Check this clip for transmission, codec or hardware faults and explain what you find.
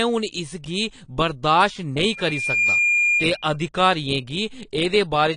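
One codec fault runs through the whole speech clip. The top end stops dead at 10 kHz, and the audio has a dull, smeared quality with a watery warble on sustained vowels and fizzy, unstable sibilants. This is likely AAC compression, consistent with AAC-LC at a bitrate around 32 kbps. At that rate the encoder drops its cut-off and spends its few bits on the loudest bands, leaving gaps or noise-filled patches in the spectrum that shift from frame to frame.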